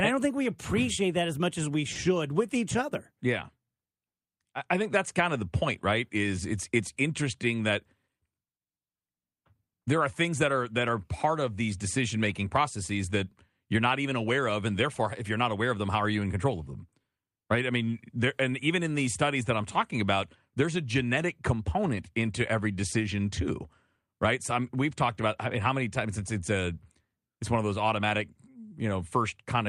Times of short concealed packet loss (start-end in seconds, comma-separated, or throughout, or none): 1.93-1.97